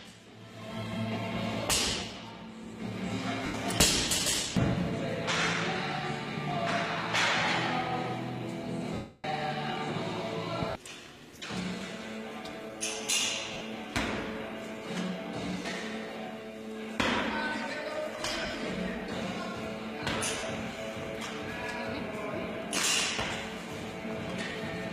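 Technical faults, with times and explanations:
3.46–3.54 s, 8.94–9.24 s, 10.70–10.82 s, 13.53–13.61 s, 18.42–18.54 s, 20.38–20.43 s, 24.52–24.55 s: lost LE Audio frames. The decoder fills each gap by repeating the last spectrum with randomised phase, so tones smear into noise. The 300 ms gap at 8.94 s fades gradually toward silence, and the gaps at 10.70, 13.53 and 18.42 s break up into several short bursts. The gap lengths fit 10 ms frames.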